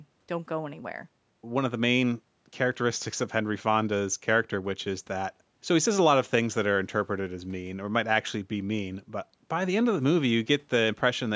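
The speech bears the normal signature of a call's microphone processing, with the lowest bass removed by its high-pass filter and nothing above 8 kHz, and no technical fault can be heard anywhere in the signal.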